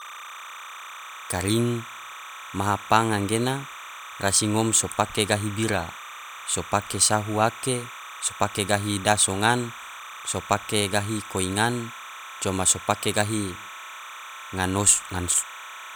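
Timecode bleed runs under the speech from start to finish: linear timecode at 30 frames per second has leaked in from an adjacent track or cable. Its square wave flips between roughly 1 and 2 kHz, giving a steady chirping warble fairly low under the speech.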